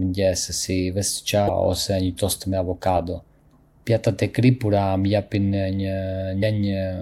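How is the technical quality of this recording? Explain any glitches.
Two brief glitches interrupt the speech. From 1.45 to 1.50 s and again from 6.39 to 6.43 s, a short chirp, click or hole cuts in. It comes from damaged data in a compressed stream: the decoder misreads corrupted frames, loses sync and hunts for the next frame header.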